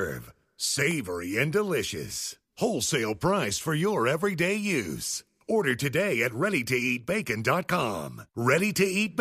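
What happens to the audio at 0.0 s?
At 0.0 s the audio is intact, with no dropout, click or distortion at that moment.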